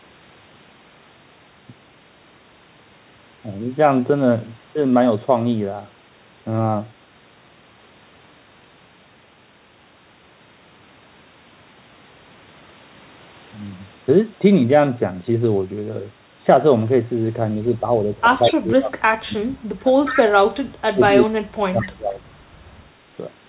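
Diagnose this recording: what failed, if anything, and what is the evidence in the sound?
Speech suppressed in double talk, at 17.80 to 17.84 s, 18.41 to 20.24 s and 20.92 to 22.21 s, sits in the call-processing stage. The speech level sags in patches: a shallow dip of about 5 dB at 17.8 s, then deeper gating of about 25 dB and about 30 dB across the two later stretches. The likely cause is an echo canceller that could not tell the local talker from the far side's loudspeaker echo and attenuated everything while both sides were active.

Echo leak, at 18.43 to 18.56 s, 20.06 to 20.22 s and 21.83 to 21.89 s, comes from the same call-processing stage. Short scraps of a delayed copy of the speech, about 198 ms behind the original, surface at about 10 dB below the speech in the first two bursts and about 15 dB below in the last. The likely cause is a loudspeaker endpoint whose canceller left part of the picked-up signal in place, which was then sent back, all within the 4 kHz band of the G.711 path.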